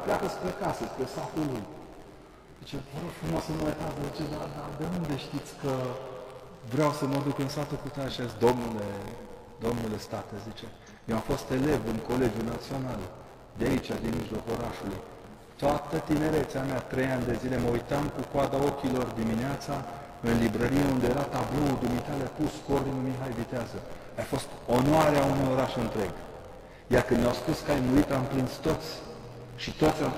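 A robotic 86.1 Hz buzz rides the sound throughout: buffer tearing, where about a tenth of each buffer replays audio some 20 ms old, which fits a 512-sample buffer.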